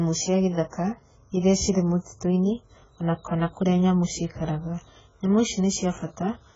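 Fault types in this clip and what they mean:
AAC compression: the speech sounds dull, smeared and warbly with nothing above about 7.6 kHz. A spectrogram shows a hard ceiling and patchy holes, likely from low-bitrate AAC-LC.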